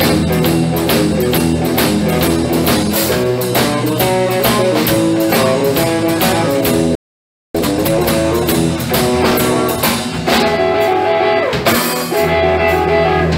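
At 6.95 s the sound cuts out mid-flow and leaves a gap of silence lasting about 0.59 s, until 7.55 s, when it resumes. This is a playback stall. The most likely cause is that the player's buffer ran dry, or its output thread was held up, so nothing reached the output until it recovered and began feeding samples again.

From 7.55 s to 8.13 s the audio that follows the gap sounds rushed. It runs at twice its normal rate, yet the pitch stays where it belongs. This is time-compressed catch-up. Having fallen behind during the stall, the player works off its backlog by cutting out short fragments and cross-fading the remaining pieces together. The hurried pace comes from those cuts.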